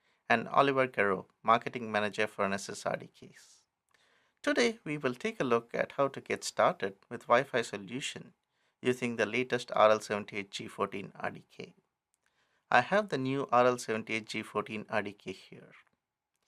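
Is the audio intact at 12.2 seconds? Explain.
Yes, at 12.2 seconds the audio is intact, with no dropout, glitch or other fault at that point.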